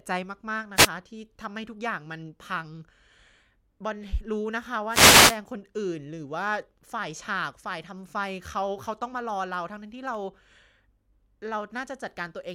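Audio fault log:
0.75–0.89 s and 4.89–5.38 s, wireless microphone noise hit: two bursts of hiss and crackle in the speech, the first brief at about 0.14 s, the second about half a second long. Each time the radio link from an analogue FM microphone fades as reflected paths cancel, so receiver noise swells over the speech. Unlike a digital dropout, the sound is not cut to silence or chopped; noise rises over it and then recedes.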